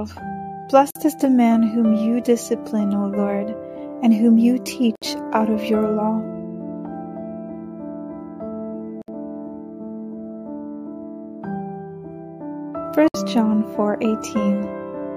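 Pieces encoded separately were joined untrimmed, so encoder delay and padding leave a gap at each join: silences with smeared edges at 0.91, 4.95, 9.02 and 13.08 s, 49 then 64 ms long, recurring every 4 s.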